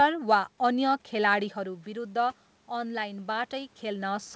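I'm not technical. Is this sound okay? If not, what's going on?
No, not quite. Around 1.5 seconds the talker moves back from the microphone and the voice drops. From 1.55 seconds to the end, you can hear automatic gain rising. The system notices the sound got quieter and slowly turns itself up to make up for it. Because it turns everything up, the room noise swells along with the voice. It is a gradual lift rather than a jump, and it lasts right to the end of the clip.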